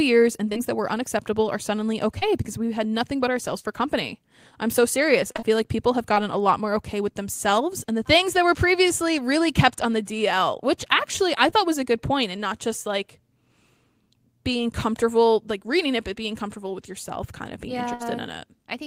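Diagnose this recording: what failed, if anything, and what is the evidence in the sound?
The network path dropped or delayed audio packets, and the receiver's concealment filled the holes. This shows up in three ways.

Short concealed packet loss: isolated packets arrived too late for the decoder, at 0.49 to 0.53 s and again immediately at 0.53 to 0.57 s, just before "that were unacceptable are". Similar holes occur at 2.19 to 2.23 s and 11.50 to 11.54 s. Each hole is about 20 ms. The decoder extended the preceding sound to fill it and then crossfaded back, so each one is heard as a brief smear or wobble.

Repeated packet loss (robotic sound): between 5.32 and 6.18 s, after "company I'm so serious" and before "a lot more okay", the network lost packets four times in quick succession. The longest gap is 22 ms, and about 80 ms is missing in total, roughly 9 percent of the stretch. Concealment patches each gap before the next one arrives, so the passage turns choppy, with small pieces absent.

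Burst of packet loss: at 17.94 to 18.02 s, right after "kind of being yeah", several consecutive packets failed to arrive in time, leaving about 60 ms missing. The receiver continued the last sound and lowered its level across the gap. The result is a short held buzz or fading hiss, and the audio then resumes further on with that segment gone.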